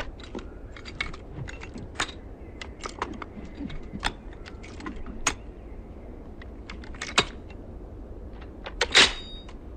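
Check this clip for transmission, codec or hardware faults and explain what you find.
No transmission, codec or hardware faults turn up anywhere in this clip.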